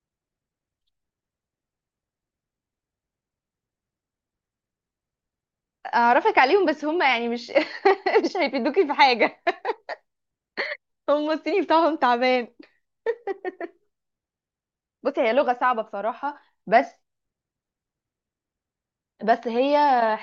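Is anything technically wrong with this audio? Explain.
No, nothing in this speech recording stood out as technically wrong on listening.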